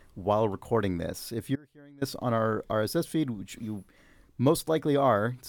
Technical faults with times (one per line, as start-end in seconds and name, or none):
1.56-2.01 audio dropout to a faint residue